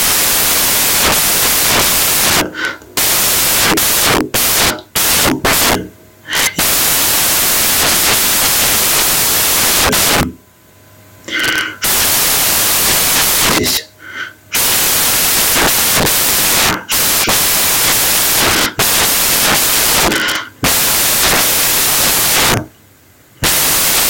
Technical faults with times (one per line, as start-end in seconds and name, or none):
0.00-24.09 samples built from the wrong bytes